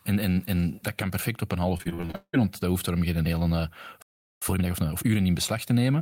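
A short speech clip with three separate delivery problems. Just after "kan perfect op een", from 1.77 to 2.35 s, you get repeated packet loss with that robotic sound: eight gaps in just over half a second, the longest around 173 ms, with roughly 340 ms of audio missing altogether. Each hole gets filled by stretching out whatever sound came just before it, so about 58% of that stretch is patched material, and the result comes out choppy with bits of the speech simply gone. Then, right after "daarom geen hele uh", there's a playback stall from 4.02 to 4.42 s, where the output just goes silent in mid-flow for about 0.39 s. The likely cause is the player running dry on buffered data or its thread getting held up, and the sound picks up again once it recovers. Straight after that, from 4.42 to 5.20 s, comes a time-compressed catch-up: the player works off the backlog built up during the stall by trimming out small slices and cross-fading the joins, so that section plays at 1.5 times normal speed. 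The pitch stays where it should be, but the speech sounds noticeably rushed.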